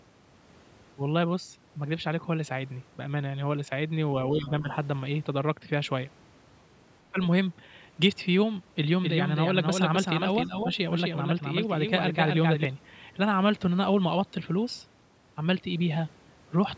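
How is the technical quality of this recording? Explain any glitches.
The recording has three kinds of fault: brief dips in the talker's level, a faint leak of a second voice, and a stretch where the audio is doubled. It has passed through a call's microphone processing, and nothing reaches above 8 kHz.

Speech suppressed in double talk occurs at 4.3 to 4.69 s, 7.11 to 7.18 s and 10.46 to 10.65 s. The talker's level drops by roughly 10 dB in the first two and about 5 dB in the third, totalling around a third of a second, then a short blip, then about a tenth of a second. The likely cause is an echo canceller that met simultaneous talk from both ends, could not tell near speech from loudspeaker echo, and attenuated everything.

The other side's voice leaking through appears at 4.44 to 4.49 s, inside the first dip. It is a very faint scrap, roughly 25 dB below the talker, lasting only about 50 ms. 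The likely cause is residual loudspeaker echo that the canceller failed to subtract from the microphone signal, so a fragment of the far end slips into the send path.

A doubled audio track runs from 9.03 to 12.65 s. A second full-band copy trails the original by about 300 ms at roughly 5 dB lower, with no reverberant tail or room colouring, and it switches on and off abruptly at those edges. The likely cause is the same signal being mixed in twice through a slower parallel path, giving a distinct delayed repeat rather than an echo.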